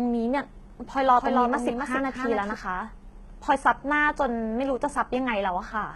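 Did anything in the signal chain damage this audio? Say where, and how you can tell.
Yes. Throughout the speech, s sounds turn gritty and lispy, and the treble sounds synthetic, with nothing above 11.8 kHz. That is codec-stage damage, likely HE-AAC compression at a very low rate, around 16 kbps, where the top band is rebuilt by copying lower bands upward.

From 0.88 s to 2.54 s, a second full-band copy of the speech trails about 300 ms behind, roughly 5 dB quieter. It has no decay or room colour, and it starts and stops abruptly. This is a doubled audio track, likely a slower second capture path or an overlapping edit.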